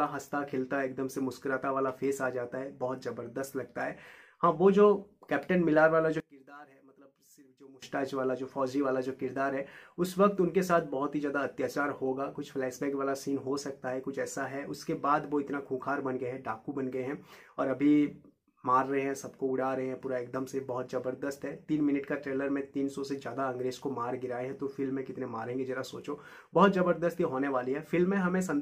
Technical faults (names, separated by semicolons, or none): one channel inverted